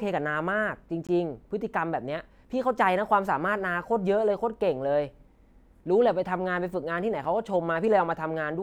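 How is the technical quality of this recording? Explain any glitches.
Two brief dropouts mar the recording. Both are blocks of digital silence, at 1.07 s (about 20 ms long) and 7.24 s (about 5 ms). In each, a run of samples was zeroed, most likely because the output buffer went unfilled in time. The cut and return are abrupt, so the shorter gap registers as a tick and the longer one as a tiny hole in the speech.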